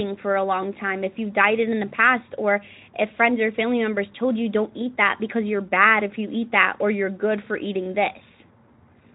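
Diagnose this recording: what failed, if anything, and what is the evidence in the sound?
Nothing in this speech recording has failed. The audio has passed through a Speex codec working normally, with only light coding colour and no content above about 3.8 kHz, which fits a setting near 15 kbps.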